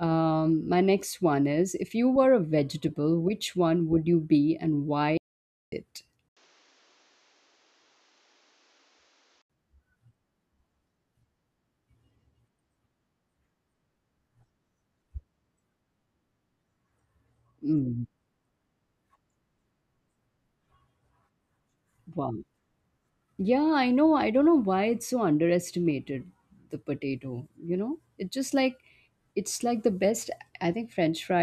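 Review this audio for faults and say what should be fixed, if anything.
An audio dropout to silence cuts out 5.18 to 5.72 s, losing about 0.55 s of speech. The gap is silent with no room tone, unlike a fade or gate, which leaves residual noise. The input was likely disconnected while recording continued. Secure cables and monitor input presence during capture.

From 6.29 to 9.50 s the input switched to a poorer device. After an 80 ms silence the speech turns dull, with nothing above 7.6 kHz, about 5 dB quieter and over a new noise floor roughly 35 dB down. A fallback microphone or headset call profile is the likely cause. Plain EQ wouldn't change tone, level and noise together. Lock the input device before recording.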